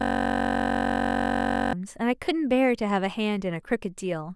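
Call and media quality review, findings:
System hang loop, 0 to 1.73 s, present from start: host froze, 21.33 ms ring buffer (fits 512 samples) replayed, giving a steady 46.9 Hz buzz.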